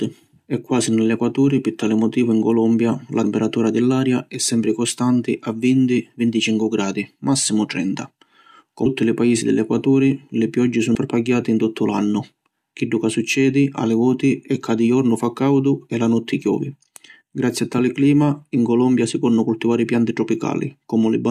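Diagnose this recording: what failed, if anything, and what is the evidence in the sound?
Brief glitches cut into the speech at 3.23 s, before "di l’aria è sempri", at 8.85 s, before "li paisi di", and at 10.94 s, after "li pioggi". At the codec stage, damaged data in a compressed stream made the decoder misread frames, lose sync and resync at the next header.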